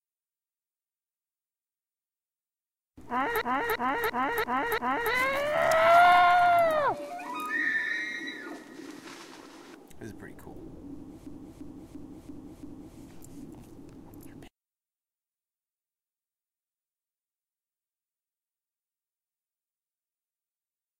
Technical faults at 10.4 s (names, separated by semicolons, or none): none